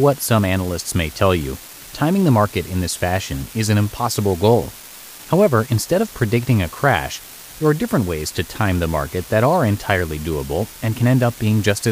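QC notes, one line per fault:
throughout, unreliable data bit: one data line in the digital path is marginal, so its bit reads wrong in a random share of samples. Each wrong bit adds or removes the same fixed amount, a step of about -25 dBFS, giving a scatter of identical spikes laid over the speech. Because the errors depend on the bit line rather than the signal, they keep going through pauses and are heard as a steady crackle or fizz under the voice and in the gaps.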